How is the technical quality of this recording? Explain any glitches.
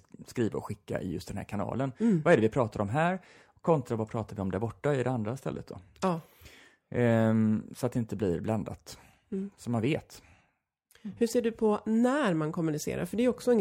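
No glitches turn up anywhere in this speech recording; there's nothing in it that needs explaining.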